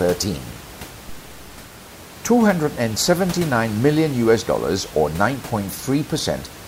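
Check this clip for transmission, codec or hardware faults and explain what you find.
Nothing here points to a transmission, codec or hardware problem; the only thing in the background is the room's own noise, sitting about 17 dB below the speech, which comes from where the recording was made and not from the system.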